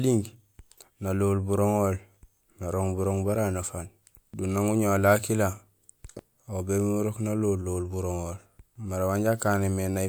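Listening closely to the speech, nothing stood out as a technical problem at any point.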